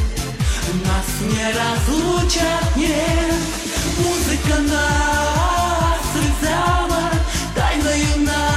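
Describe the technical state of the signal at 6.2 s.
Damaged data in the compressed stream from 6.18 to 6.24 s makes the decoder misread those frames and resync, producing a brief chirp, squawk, click or short hole in the sound.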